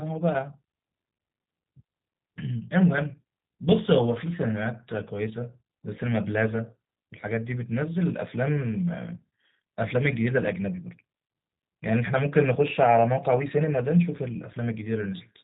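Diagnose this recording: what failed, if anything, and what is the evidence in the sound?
The failure is at the codec stage: G.729 coding runs through the whole speech clip. The voice sounds plainly rough and synthetic, and a spectrogram shows a hard ceiling at 4 kHz, which fits an 8 kbit/s coder rebuilding each 10 ms frame from a filter, pitch predictor and sparse pulses.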